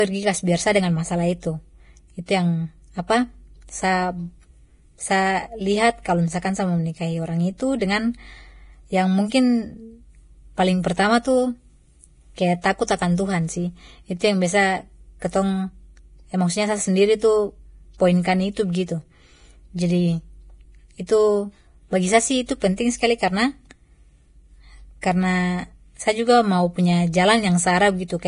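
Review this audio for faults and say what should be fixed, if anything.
The whole 28-second speech clip carries heavy damage that is likely from Vorbis compression. Nothing is present above about 10.6 kHz. The treble that remains sounds hissy and grainy. The codec rebuilds the top band from a coarse outline, so fine detail turns into noise-like fill. Consonants lose their edges. Tones sound rough. The depth of damage fits a low bitrate, near 29 kbps. Re-encode from the source at a much higher quality setting.

Pre-echo occurs at 12.87 s and again at 25.01 s. A short hiss arrives just before a sharp onset. It spreads about 15 ms ahead at the first point and about 17 ms at the second. The codec spreads its noise over a whole block. Noise sized for the loud attack leaks into the quiet moment before it. The onset then sounds soft and smeared. Use an encoder with shorter transform blocks for attacks, or a higher bitrate.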